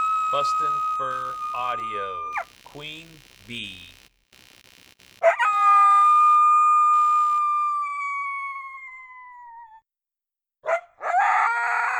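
From 0 to 7.39 s a buzzing, chirping layer of computer activity noise sits roughly 30 dB below the sound, pulsing at around 70 Hz. Unlike steady mains hum, it tracks processor or graphics load shifting the shared ground, then stops.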